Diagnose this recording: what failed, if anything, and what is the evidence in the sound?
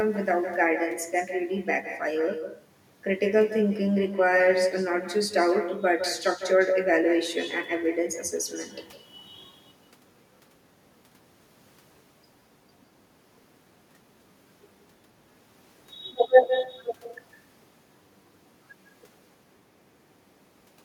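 The failure is at the call-processing stage: echo with no canceller. Across the whole clip, every stretch of speech is followed, roughly 150 ms later, by a second copy about 9 dB quieter and thinner. That fits the far end playing the call through a loudspeaker and its microphone picking it up again, with nothing cancelling it. The delay is the network round trip.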